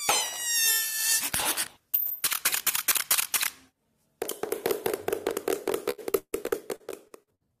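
From 5.90 to 7.43 s the sound turns choppy and robotic, with holes up to 150 ms. This is repeated packet loss, with about a third of the stretch patched by repeating the preceding sound.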